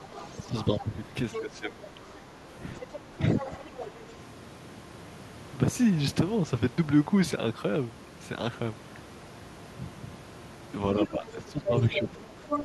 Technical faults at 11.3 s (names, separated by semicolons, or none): other side's voice leaking through; speech suppressed in double talk